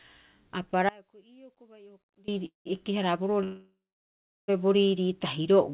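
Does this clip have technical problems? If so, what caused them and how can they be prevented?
Yes. From 0.89 to 2.28 s the speech abruptly cuts out for about 1.39 s, leaving only a faint residue roughly 25 dB below normal level, then snaps back. This audio dropout to a faint residue likely comes from a signal break upstream while the following path stayed live. Securing connectors and monitoring input level during capture would prevent it.

Two call audio freezes follow, at 2.46 to 2.67 s and 3.43 to 4.50 s. Each time the last sound is stretched into a fading buzz or hiss that sinks to silence, about 140 ms and then 710 ms, before the speech resumes where it stopped, with nothing lost and only delay added. Likely cause: held-up packets emptied the jitter buffer. A steadier network or a deeper adaptive jitter buffer would prevent it. The narrow band with nothing above 4 kHz fits the G.711 call codec.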